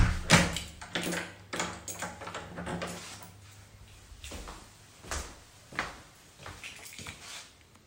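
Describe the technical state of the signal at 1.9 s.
At 1.9 s the signal is intact, with no dropout, distortion, click or other technical fault to be heard at that moment.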